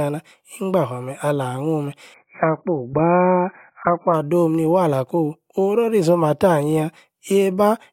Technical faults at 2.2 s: adaptive stream at a lower bitrate

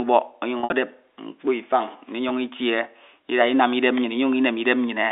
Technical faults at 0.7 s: packet loss with pitch repetition

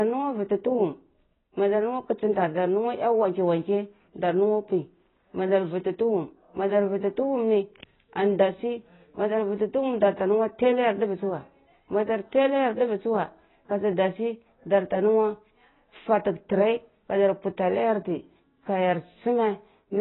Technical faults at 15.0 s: AAC compression

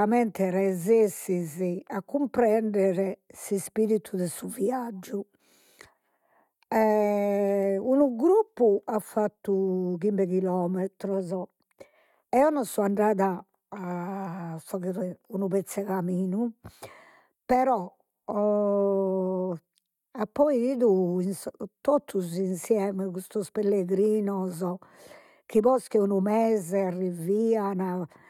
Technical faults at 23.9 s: none

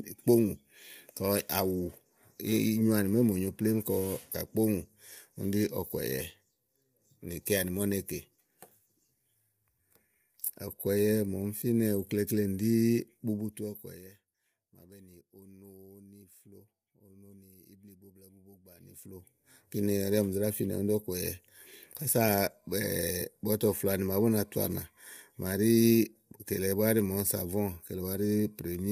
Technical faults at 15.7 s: low-delay AAC compression

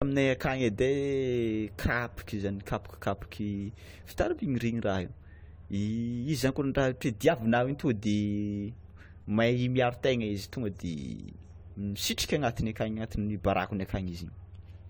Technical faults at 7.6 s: generation loss

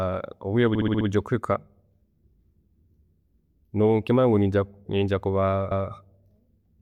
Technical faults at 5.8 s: repeated frames

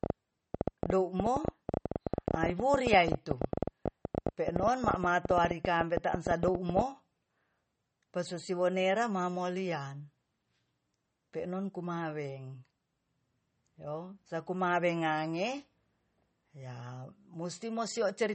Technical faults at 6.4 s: MP3 compression; train of clicks

